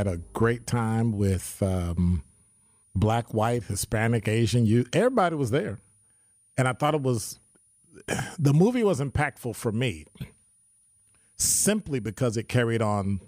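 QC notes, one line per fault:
Throughout, switching supply whistle: a faint high tone wandering between 9.47 and 9.80 kHz, roughly 40 dB under the speech, from a power supply switching audibly.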